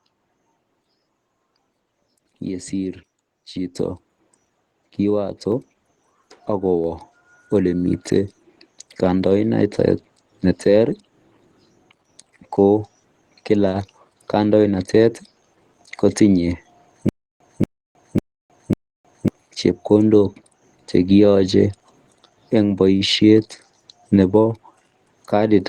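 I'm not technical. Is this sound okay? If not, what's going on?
No. Microphone volume stepped up at 3.75 s and again at 5.52 s: the call software raised the microphone level, so voice and background suddenly get louder together.

Stutter with silent gaps from 17.09 to 19.28 s: a short 0.23 s snippet repeats four times, each followed by 0.31 s of dead silence. This is likely a stalled stream replaying its last piece, and the audio meant for that stretch is lost.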